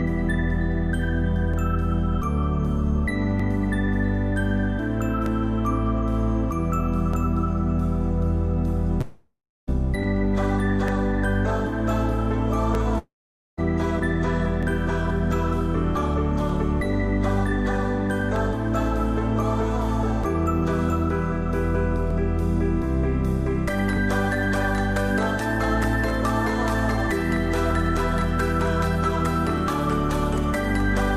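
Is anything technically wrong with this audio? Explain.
Yes. From 1.54 s to the end, a click or pop repeats every 1.87 s while there is signal. These are likely clock drift buffer slips: two devices' clocks differ by several hundred ppm, so the buffer between them periodically drops or repeats a block of roughly 70 samples.

There are two long network dropouts, at 9.01–9.70 s and 12.98–13.60 s. In each, the last sound is stretched into a fading buzz, then silence takes over for about 0.3 s and 0.5 s respectively. The audio resumes with roughly 0.6 s gone, likely because packets never arrived.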